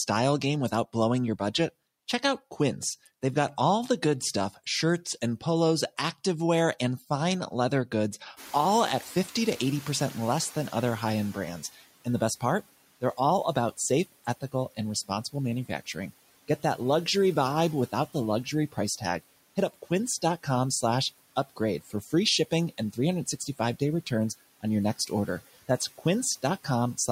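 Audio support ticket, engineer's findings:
Noise suppressor catching up, 8.36–11.48 s: room noise steps up around 8.5 s, passes under-reduced, then sinks about 10 dB over 3.1 s as the estimate adapts. A gradual fade, not a fixed noise floor.

Speech cut by the noise suppressor, 14.12–14.54 s (dip about 18 dB) and 21.81–22.13 s (about 11 dB): short stretches of speech pulled down with the background. Background dips with them, unlike a level or mic fault.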